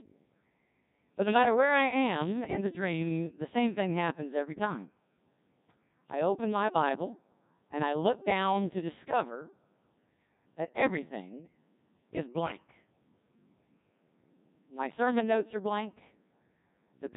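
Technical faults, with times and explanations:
Throughout, Codec 2 vocoder: the speech has a robotic, buzzy quality from start to finish, and the damage is heavy. The decoder keeps none of the original waveform. It rebuilds each frame from sine waves driven only by pitch, voicing, energy and a coarse spectral envelope. At this degree of smearing the sound fits a very low rate of about 1.6 kbit/s, so breath, consonant detail and natural timbre are replaced by synthetic harmonics.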